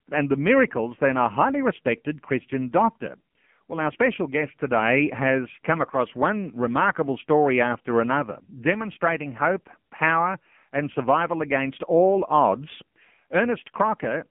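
The speech has been through the AMR narrowband mobile codec for the whole clip. Nothing above 3.5 kHz survives, and the low end thins below about 150 Hz. The voice sounds buzzy and synthetic, heavily damaged. That fits a low rate near 6.7 kbps, where few pulses model each frame.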